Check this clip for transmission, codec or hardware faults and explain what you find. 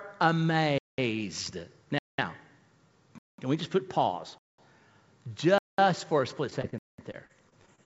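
Two faults are present: regular gaps between chunks, and a burst of repeated packet loss near the end, heard over a call path whose spectrum stops at 8 kHz, consistent with G.722 at 64 kbps.

Gap between chunks at 0.78, 1.98, 3.18 (just before "can we just put"), 4.38 (just after "we just put pause"), 5.58 and 6.78 s (after "for a split"). Each 200 ms hole follows a 1 s chunk of sound. On the waveform these are flat, hard-edged blanks, and on the spectrogram they are clean vertical stripes.

Repeated packet loss (robotic sound) runs from 6.50 s to the end. Successive losses are patched by stretching the previous sound, leaving choppy audio with pieces missing. The spectrogram shows smeared, repeating frames with ragged breaks.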